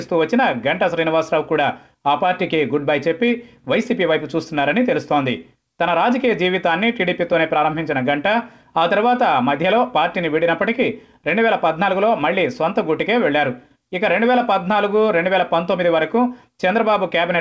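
Clock drift between sender and receiver runs throughout: the sender's clock is about 1.5 percent slow, so the receiver's jitter buffer keeps draining. Repeated timing corrections from 0.12 to 16.91 s duplicate short pieces to refill it, adding roughly 300 ms and slowing playback to 98 percent, heard as faint hiccups over a band that stops at 8 kHz.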